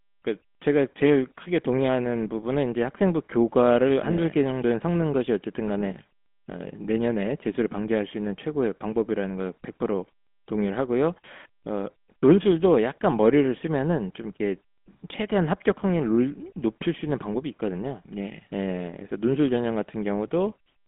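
From start to finish the speech carries GSM full-rate codec damage: a buzzy, gravelly rasp from coarse pulse excitation, fitting a 13 kbps coder, inside a 200 Hz to 3.5 kHz phone band with nothing above 3.8 kHz. Plain band-limiting would sound muffled but smooth.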